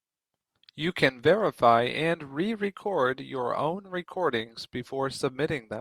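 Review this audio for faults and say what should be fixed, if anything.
Sample clock jitter runs through the whole clip. The converter's timing wanders by roughly a microsecond or two, so steep, loud stretches of the speech gain a rough hiss about 40 dB down that vanishes in pauses. On a spectrogram, it appears as faint broadband haze tracking the brighter syllables, with clean gaps between them. To prevent it, clock the converter from a stable, low-jitter source.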